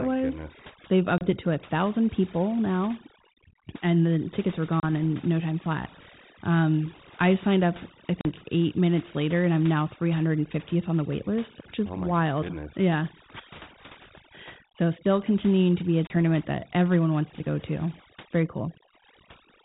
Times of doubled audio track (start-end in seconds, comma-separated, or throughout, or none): none